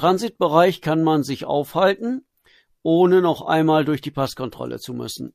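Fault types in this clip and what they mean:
Nothing in this speech recording stands out as a technical fault, so there's nothing to list here.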